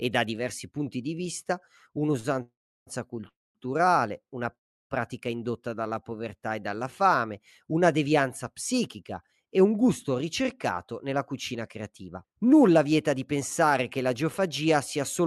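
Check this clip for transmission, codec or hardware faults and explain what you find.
The speech has delay-related faults from a call path: one short stall, three freezes, a slow-down and two speed-ups. The band edge near 12 kHz fits Opus at about 64 kbps.

A short stall from a late packet occurs at 2.19–2.26 s, right after "diversi punti di vista". The last sound is held for 45 ms with a slight buzz or dip, showing as a smeared, stretched harmonic band.

Call audio freezes occur at 2.42–2.89 s, 3.29–3.57 s and 4.55–4.92 s. Each is a brief fading buzz or hiss followed by silence of 330, 220 and 340 ms, seen as a flat waveform gap. The likely cause is packets held up until the jitter buffer ran empty.

A jitter buffer slow-down runs from 5.69 to 6.70 s, just before "fame una devianza". Repeated pitch periods add 114 ms, so the speech runs at 90% speed with unchanged pitch. On a spectrogram, the harmonic patterns look stretched horizontally.

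Jitter buffer speed-ups run from 8.73 to 10.10 s at 106% speed, removing about 100 ms, and from 10.93 to 14.15 s at 107% speed, removing about 200 ms. Cut pitch periods make the speech sound hurried, with syllables compressed in time.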